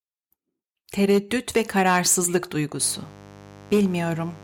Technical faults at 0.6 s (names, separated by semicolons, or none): none